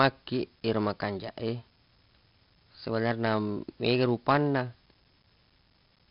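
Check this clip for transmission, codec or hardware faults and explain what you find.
One codec fault runs through the whole speech clip: 4-bit ADPCM compression, heavily applied. Each sample is coded as a coarse 4-bit step from a predicted value, so the quantisation error becomes broadband grit riding on the speech, louder on loud passages and smeared on sharp onsets where the adaptive step lags. Nothing reaches above 5.3 kHz, which, together with the grain, fits ADPCM at around 44 kbps on a low sample rate, leaving the sound dull as well as rough.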